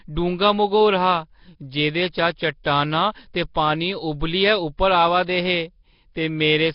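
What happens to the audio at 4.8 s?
At 4.77 s, just after "ते पानी उब्बलियै" and before "आवा दे हे", there is pre-echo. A sharp attack sits late in a transform block, and the quantisation noise the codec spreads across that whole block, sized for the loud onset, also fills the quiet gap ahead of it. The result is a brief hiss, about 15 ms long, leading into the attack, which then sounds soft and smeared rather than crisp.

That block-based coding comes from the compression running through the whole clip, most likely Nellymoser compression (Nellymoser Asao) at a low rate that fits roughly 22 kbps. The damage is heavy. Weak bands are replaced with noise, giving a rough, hissy halo and an underwater smear, and nothing is present above about 5.3 kHz, so the sound is dull as well as grainy around this point.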